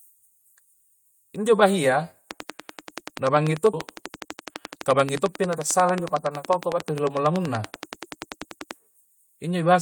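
From 2.31 s to 8.72 s a steady ticking sits over the speech and through the pauses: a train of clicks, about 70 of them, evenly spaced at 10.4 per second and peaking about 15 dB above the speech. Likely interference or a faulty connection or power supply injecting the same pulse repeatedly.

At 3.73 s the speech lurches forward with no gap, two moments joined almost directly. This skip ahead dropped roughly a second of audio, discarded in transit or by an overflowing jitter buffer while later audio was already waiting, cutting the delay by about as much.

From 3.86 s to 6.84 s the speech sounds hurried at unchanged pitch, running at 109% speed. This jitter buffer speed-up trimmed short pitch-period pieces in quick succession, removing roughly 0.3 s to bring the excess buffered delay back down.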